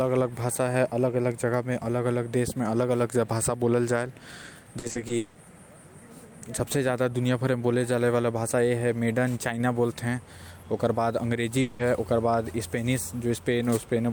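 From 4.79 to 5.37 s, repeated packet loss turns the speech choppy and robotic. About six holes, the longest 180 ms, are patched by stretching the previous sound, covering roughly half the span. A spectrogram shows smeared, frozen harmonic bands broken by abrupt seams.

At 11.61 to 11.81 s, the sound freezes into a fading buzz for 180 ms and then resumes with that stretch missing, likely a long network dropout. The waveform shows a decaying, repetitive block, and the spectrogram shows flat, unchanging bands instead of speech.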